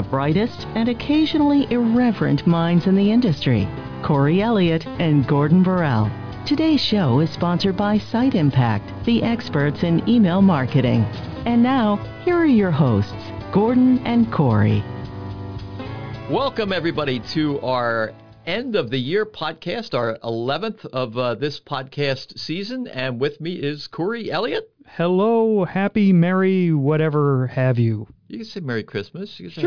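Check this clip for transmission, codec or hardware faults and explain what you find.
Nothing stood out on listening to the clip.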